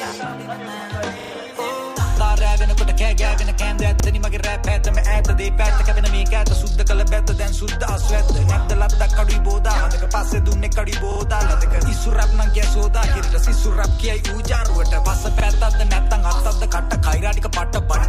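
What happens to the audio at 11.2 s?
A short stutter runs from 11.12 to 11.2 s: a piece of sound about 40 ms long plays three times in a row, with a hard join at each repeat. This is a repeated buffer. New audio arrived late, so the device replayed its last buffer, which fits a 40 ms buffer size.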